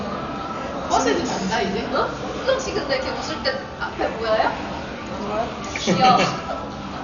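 From start to finish the audio is dull and band-limited, with nothing above about 7 kHz, and a rough, fluttering noise clings around any tonal parts of these everyday sounds. This is heavy damage, likely from Dolby Digital compression at a very low bitrate, which fits something near 48 kbps. Starved of bits, the encoder cuts the upper band and leaves many frequency lines without mantissa data, so the decoder fills them with dither noise, producing the grainy flutter.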